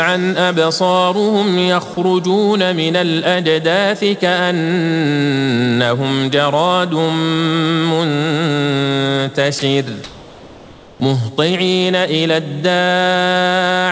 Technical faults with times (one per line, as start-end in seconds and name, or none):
9.59-9.62 sound dropped by the voice detector
10.04-11.00 comfort noise in place of the background